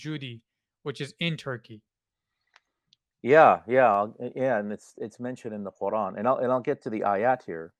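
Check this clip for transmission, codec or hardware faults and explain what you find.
Two brief faults turn up in the speech, at 1.74 s and 3.94 s. Each is a single sharp click, most likely dropped samples, a handful lost so the waveform jumps ahead. Unlike a dropout, no audible gap or missing sound follows, just the thin instantaneous tick.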